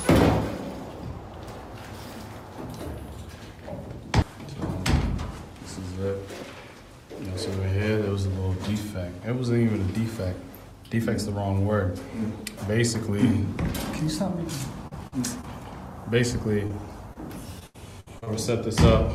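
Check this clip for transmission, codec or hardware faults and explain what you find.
Packet loss problems cluster in the last few seconds of the audio, in three forms.

Short concealed packet loss occurs at 14.87–14.93 s, 15.41–15.45 s, 16.67–16.71 s and 17.13–17.17 s. Each time, a few tens of milliseconds never arrived, and the receiver extended the preceding sound to cover the hole, producing a brief smear or wobble. A spectrogram shows a short, unnaturally steady patch.

A burst of packet loss runs from 15.07 to 15.18 s. Several consecutive packets went missing, so the last sound was stretched and faded over roughly 0.05 s before the audio resumed further along. It sounds like a brief held buzz or hiss dying away, visible as a decaying flat stripe.

Repeated packet loss (robotic sound) spans 17.59–18.28 s, with five gaps, the longest 74 ms, filling about 31% of that stretch. Patch after patch of continued sound makes the audio choppy, with pieces missing. 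The waveform shows repeated blocky segments, and the spectrogram shows smeared, frozen-looking bands.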